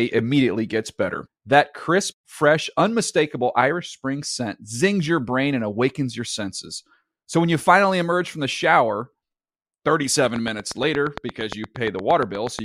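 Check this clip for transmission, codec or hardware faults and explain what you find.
One fault stands out, a train of clicks running from 10.25 s to 12.60 s near the end of the speech. Evenly spaced pulses arrive at 8.55 per second, around twenty in all, with peaks roughly 10 dB above the surrounding signal, ticking through pauses as well as speech. The likely cause is electrical interference from nearby equipment or a faulty connection or power supply. Unlike random crackle or codec dropouts, these clicks share one shape and keep a steady rhythm regardless of the audio beneath.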